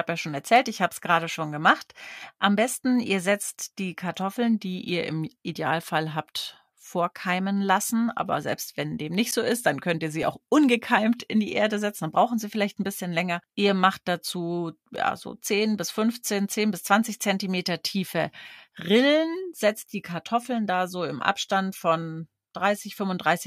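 At 9.31 s, after "selbst wenn dem nicht", a block of digital silence drops about 11.6 ms, which fits a 512-sample buffer left unfilled, so it sounds like a tick or dip. Shorter ones follow at 10.23 s, after "dann könnt ihr sie" (1.7 ms), and 14.96 s, after "macht dazu" (3.2 ms), each a hard-edged click or tick.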